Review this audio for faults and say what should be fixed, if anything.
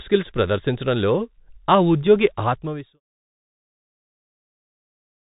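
The whole speech clip carries Bluetooth CVSD headset codec damage: one-bit delta coding at a rate that fits a 64 kbps link cuts everything above 4 kHz, so s sounds turn scratchy over a granular hiss. A spectrogram shows a hard ceiling at 4 kHz with a speckled noise floor, and loud peaks look jagged in the waveform. The fade-out ending near 3.0 s is a clean, deliberate ramp. To prevent this, record through a wideband microphone path instead of the headset's hands-free profile.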